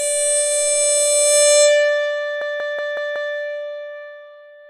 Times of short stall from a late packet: none

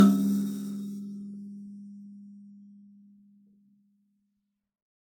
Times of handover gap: none

